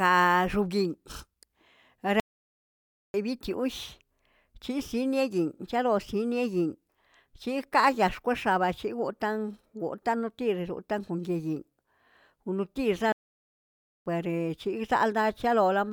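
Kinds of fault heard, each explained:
Playback stall: The speech cuts to silence mid-flow twice, near 2.20 s and 13.12 s, each gap lasting about 0.94 s. The likely cause is the player running out of data or its thread being blocked.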